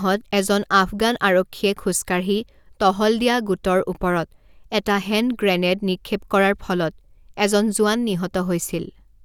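Nothing in the speech stood out as a technical fault on listening.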